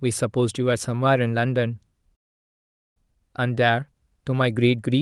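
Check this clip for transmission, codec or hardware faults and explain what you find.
There's one fault here, a call audio freeze. From 2.15 s to 2.98 s the speech breaks off and you get about 0.8 s of near silence. That's most likely packets stalling in transit so the jitter buffer runs dry; the receiver briefly extends the last sound, then goes quiet. When packets resume, the speech carries on exactly where it left off, so nothing's lost, it just arrives 0.81 s later. The call codec's top end tops out around 12 kHz.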